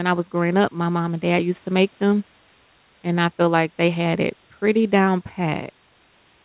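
No faults are audible; the speech arrives band-limited at 4 kHz, which fits a G.711 A-law call path at 64 kbps, with room noise sitting about 38 dB below it.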